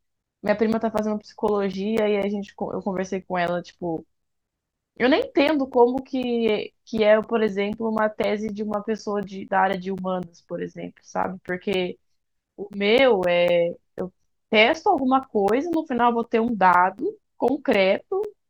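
Periodic USB or driver dropouts run through this speech clip from 0.23 s to 18.2 s, repeating every 0.25 s, four times a second. Each time, something blocks the USB bus or audio driver and roughly 10 ms of audio goes missing, replaced by silence. Around seventy of these short gaps fall across that span. They are heard as a steady ticking that sounds only while the speech is present and fades out in the pauses.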